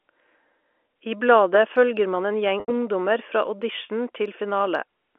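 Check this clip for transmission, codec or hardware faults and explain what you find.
One transmission fault is audible, heard through a narrow 300 to 3400 Hz telephone band consistent with G.711 coding. Packet loss with pitch repetition, 2.60 to 2.68 s, between "følger man en gjeng" and "ungdommer fra": 80 ms went missing, and the receiver bridged it by looping the last pitch cycle, heard as a repeated tone fading into silence before the speech returns with a short cross-fade.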